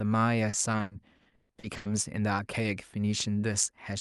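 From 0.49 to 1.87 s there's repeated packet loss: about a dozen dropouts, up to 140 ms each, get patched by stretching the previous sound, so the speech turns choppy and robotic.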